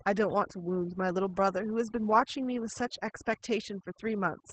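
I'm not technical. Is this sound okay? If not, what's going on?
No, two problems run through the whole speech clip.

First, the pauses between phrases drop to near silence with twinkling specks. That is overdone noise removal: a noise-cleaning tool set too strong, shutting off parts of the sound it mistook for background noise, including quieter parts of the voice.

Second, the voice is muffled and a little hoarse and robotic, with nothing above about 8.5 kHz. That is Opus voice compression at a low setting, which throws away the higher tones and describes the rest only roughly to save space.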